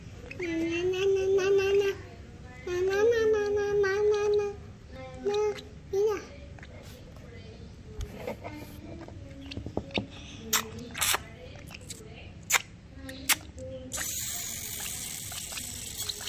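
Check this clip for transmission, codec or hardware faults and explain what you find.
No faults detected.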